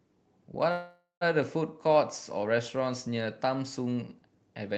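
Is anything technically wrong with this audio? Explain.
Yes. From 0.71 to 1.23 s the speech is interrupted by a call audio freeze, most likely from packets held up in transit until the jitter buffer ran dry. The receiver stretches the last sound into a fading buzz or hiss for roughly half a second, with about 140 ms of near-silence at the end. Then the speech resumes where it stopped, so nothing is lost but everything afterward arrives about 0.5 s later. On a waveform this appears as a decaying smear and then a flat stretch. On a spectrogram it shows as blurred horizontal streaks, then an empty gap beneath the call path's 8 kHz ceiling.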